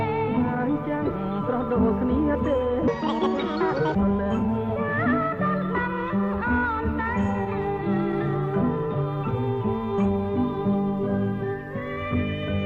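From 2.88 to 3.95 s the sound abruptly turns high and hurried, rising by roughly ten semitones and rushing along at nearly double pace, then drops back to normal. This is a section at the wrong speed: that stretch runs about 1.89 times faster than it was recorded, so pitch and tempo shift together. The likely cause is an editor or player handling that segment against the wrong clock rate.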